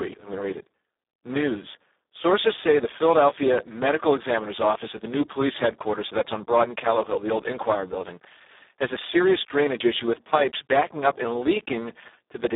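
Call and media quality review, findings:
Speex codec, heavy damage, whole clip: speech hoarse, noisy, near-robotic, as the excitation is starved of bits at what sounds like a roughly 4 kbps mode. Band 250 Hz to 3.7 kHz. Spectrogram shows smeared, buzzy harmonics and nothing above 3.8 kHz.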